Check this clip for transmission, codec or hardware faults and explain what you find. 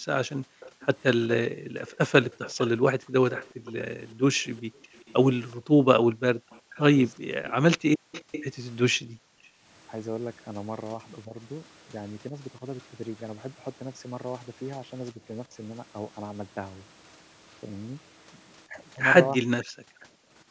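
Two call-path faults recur through the recording: the echo canceller's double-talk handling suppresses the speech, and residual echo leaks back into it.

Speech suppressed in double talk, from 0.0 to 12.62 s, 14.76 to 15.54 s and 18.66 s to the end. With both sides likely talking at once, the canceller cannot separate voice from echo and attenuates everything. The speech dips or drops out in pieces, by about 40 dB at worst (about 20 dB in the middle stretch).

Echo leak, from 0.31 to 8.44 s, briefly at 12.8 s, and 19.63 to 20.05 s. The loudspeaker side's canceller likely missed part of the loudspeaker pickup, sending it back 378 ms late. A faint delayed copy of the speech trails behind, about 20, 40 and 25 dB below the speech respectively.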